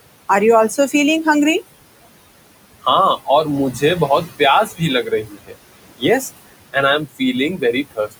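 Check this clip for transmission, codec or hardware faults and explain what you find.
The faults come from the noise suppressor in the processing chain, not from transmission or hardware. It mistreats the speech twice over, while the room noise, sitting about 15 dB below the speech, is real background rather than a fault.

Noise suppressor artifacts run through the whole clip. The suppressor pulls down every band it judges to be steady noise, by about 20 dB, frame by frame. The background sinks in the pauses and swells back under the speech.

Speech cut by the noise suppressor occurs at 4.66 to 4.81 s, 5.04 to 5.56 s, and 7.57 to 8.14 s, the last just after "एंड आई एम". The suppressor mistook quiet speech for noise and turned it down with the background, by about 13, 19 and 20 dB at worst. Roughly a tenth to a third of a second goes faint each time, sounding swallowed.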